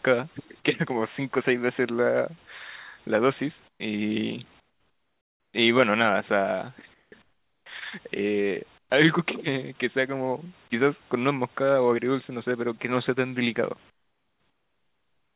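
Speech, in which the pauses at 3.68–3.8, 4.6–5.54, 6.94–7.12, 7.22–7.66, 8.78–8.9 and 13.9 s to the end turn into a flat, featureless hiss about 8 to 19 dB quieter than the room background. This is comfort noise in place of the background, likely from discontinuous transmission substituting synthetic noise during silences.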